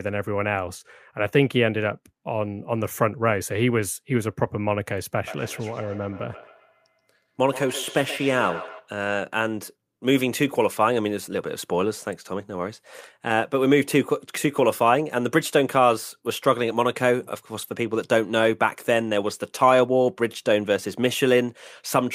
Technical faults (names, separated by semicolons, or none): feedback echo between two devices